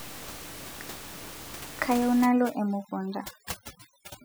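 A speech clip whose last part, from 2.25 s to the end, has the background dropping and breaking up into twinkling specks. That is overdone noise removal: a noise reducer set too aggressively is cutting individual frequency bands right down whenever they sit close to its noise estimate, so the softer parts of the voice are stripped away along with the room noise, which before 2.25 s sits about 15 dB below the speech.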